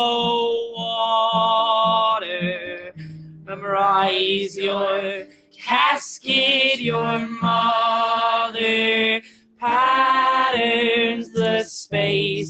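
Throughout the clip a speech-oriented noise suppressor is acting on sound it was not designed for. It treats sustained content and decays as noise, so gain swings by around 10 dB and the sound pumps and thins while transients pass largely intact. The band also stops at 8 kHz, consistent with the call path's codec. The suppressor cuts the sound hard at four points: 0.59–0.88 s (about 15 dB down), 2.57–3.64 s (about 16 dB), 5.22–5.62 s (about 17 dB) and 9.19–9.62 s (about 18 dB). Each time, held material sinks or its tail is chopped short.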